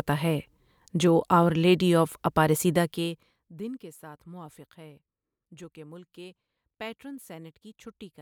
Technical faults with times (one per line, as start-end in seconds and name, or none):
none